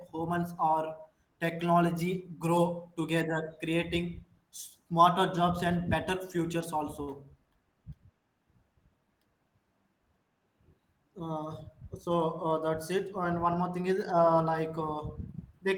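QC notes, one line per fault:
7.03 to 7.10 s, short stall from a late packet: a packet arrived late, the jitter buffer ran dry, and the receiver stretched the last sound for 42 ms before resuming exactly where it left off, so nothing is lost but the sound hangs slightly too long with a slight buzz or dip. On a spectrogram the harmonics run flat and repetitive for that stretch; the waveform shows a short run of near-identical repeated cycles, and everything after sits 42 ms later.
11.81 to 12.53 s, jitter buffer speed-up: with more audio queued than the buffer targets, the receiver trimmed short slices of a pitch period or a few at a time, over and over, removing roughly 40 ms in total. Playback runs at about 105% speed with pitch unchanged, so the speech sounds a touch hurried. On a spectrogram the harmonics keep their spacing while syllables shorten; the waveform shows cycles occasionally missing at splice points without level jumps.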